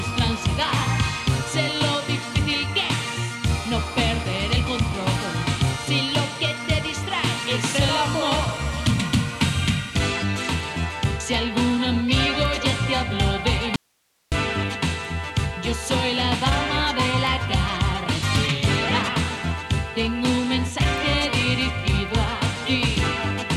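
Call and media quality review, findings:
Audio dropout to a faint residue, 13.76 to 14.32 s (about 0.56 s). Signal cuts out abruptly, leaving only hiss roughly 45 dB below programme level, then returns mid-flow. Likely an upstream source or capture interruption with the downstream path still live. Steady hiss through the gap separates it from a digital mute (true silence) and from a fade or natural pause (gradual edges).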